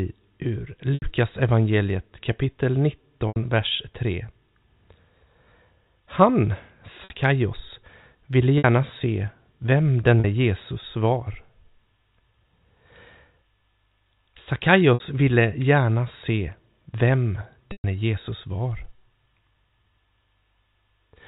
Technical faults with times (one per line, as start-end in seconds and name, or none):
0.94-1.02 packet loss with pitch repetition
3.28-3.36 packet loss with pitch repetition
7.04-7.10 packet loss with pitch repetition
8.58-8.64 packet loss with pitch repetition
10.20-10.24 packet loss with pitch repetition
14.94-15.00 packet loss with pitch repetition
17.72-17.84 packet loss with pitch repetition